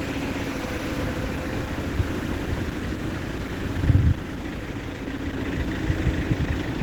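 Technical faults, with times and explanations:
Throughout: Opus compression. The sound is plainly damaged, with tones turned rough, grainy and noisy rather than swirling, and a muffled, hoarse quality typical of the encoder's hybrid speech-oriented mode. This is likely caused by Opus running at a low rate, and the damage fits roughly 16 kbps. Because band energies are kept and starved bands are filled with folded or noise content, holes are few but texture degrades. Bandwidth stays full, with content reaching about 20.1 kHz.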